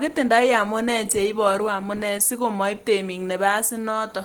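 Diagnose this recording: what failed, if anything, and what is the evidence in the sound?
Throughout the speech the voice sounds muffled and hoarse, with a rough, grainy texture, and the damage is plainly audible from start to finish, even though energy still reaches about 20.2 kHz. At the codec stage this is likely Opus compression at a low rate, around 16 kbps. The encoder appears to be running in its hybrid speech mode, filling bands with folded or noise-like content instead of the true detail.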